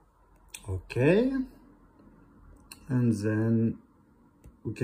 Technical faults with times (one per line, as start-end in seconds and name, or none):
none